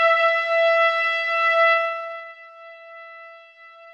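1.72–2.34 s: zipper noise, the level dropping about 25 dB in unsmoothed 2 dB steps that tick, drawing a staircase waveform and vertical spectrogram clicks.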